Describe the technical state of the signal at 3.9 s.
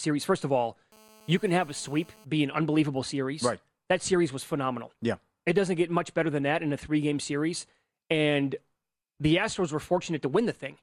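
At 3.9 s the speech signal is intact, with no fault audible at that moment.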